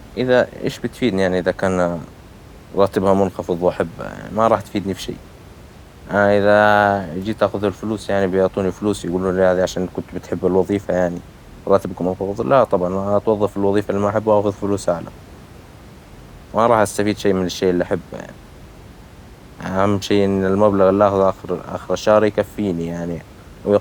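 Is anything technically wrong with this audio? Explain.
No, the signal path shows no technical problems; the only thing beneath the speech is the room's own background noise, sitting about 23 dB below it, which belongs to the recording space rather than to the system.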